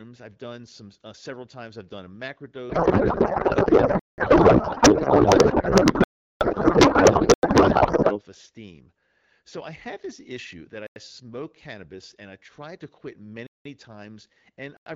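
Codec payload misread, from 2.70 s to 8.21 s: the AMR frames were packed octet-aligned but read as bandwidth-efficient, so every field in each frame lands in the wrong place. The decoder still produces output, but the speech gives way to garbled noise and warble that barely tracks it, until the packing agrees again at 8.21 s. Before and after, the AMR wideband (HD Voice) codec at 12.65 kbit/s sounds clear.

Blocks of digital silence at 3.99 to 4.18 s, 6.04 to 6.41 s, 7.34 to 7.43 s, 10.87 to 10.96 s, 13.47 to 13.65 s and 14.77 to 14.86 s: likely because the output buffer wasn't filled in time, runs of zeros replace the sound. Each hole opens and closes abruptly. The lengths are about 0.09 s, 0.19 s and 0.37 s, doubling steps that fit whole buffers of 4096, 8192 or 16384 samples being dropped.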